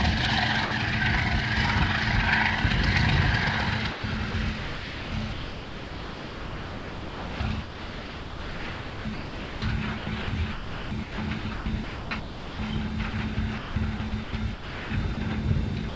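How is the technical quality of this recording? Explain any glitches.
The recording is repeatedly broken up. Sound gives way to synthetic background noise in brief gaps and long choppy stretches, all over a call link that carries nothing above 8 kHz.

Sound dropped by the voice detector, at 0.65–0.71 s, 3.92–4.04 s and 15.89–15.95 s: the sound turns to steady hiss for 60 to 120 ms. This is likely because the sender's detector took it for background and comfort noise filled in.

Sound chopped by the voice detector, at 4.31–9.62 s, 9.98–12.59 s and 13.10–15.17 s: the sound is choppy, with repeated holes filled by synthetic noise. This likely comes from the detector repeatedly stopping and restarting transmission.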